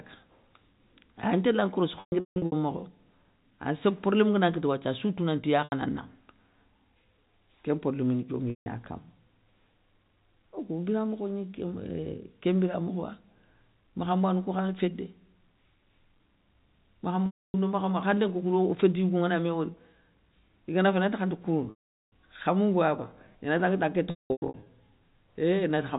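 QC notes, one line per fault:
2.0–2.52 s, 5.64–5.72 s, 8.5–8.66 s, 17.26–17.54 s, 21.7–22.06 s, 24.1–24.66 s: packet loss with pitch repetition. Gaps run from 80 ms to about 0.4 s. The ones at 2.0 s and 24.1 s are broken up, with the longest runs 160 ms and 200 ms. The receiver loops the last pitch cycle, so short gaps buzz. Longer ones fade to silence, then cross-fade back. Gap lengths fit 20 ms packets under G.711 telephone coding.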